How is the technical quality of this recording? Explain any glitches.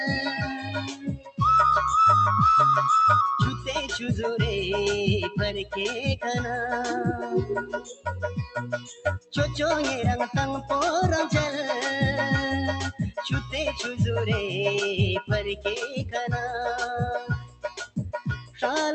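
The technical quality is compromised by a speech-tuned noise suppressor that stayed active on non-speech material. The sound arrives through a call path that tops out around 8 kHz, with the usual coding texture of a call codec.

Noise suppressor applied to music or sounds: this runs throughout. The suppressor treats sustained tones, ambience and reverberant tails as background noise and pulls them down, while onsets pass mostly intact. The resulting gain swings of around 10 dB make the sound pump and flutter, with held material thinning out between attacks.

Sound cut by the noise suppressor: five moments are hit harder than the rest, at 0.58–1.4 s, 7.6–8.07 s, 8.46–9.35 s, 17.2–17.99 s and 18.37–18.63 s. In each, the suppressor classified the steady or decaying content as noise and attenuated it, by about 18, 18, 19, 17 and 13 dB respectively. These stretches sink in level and their decays are chopped short.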